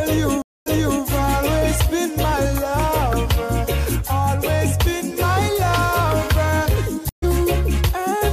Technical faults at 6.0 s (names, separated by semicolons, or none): none